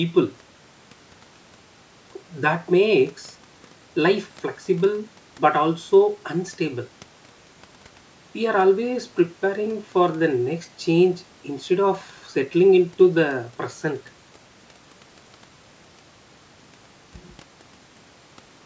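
Nothing here counts as a fault: the speech has simply come through a call's microphone processing, which trims away the lowest bass and leaves nothing above 8 kHz, and that's just what such a path normally does.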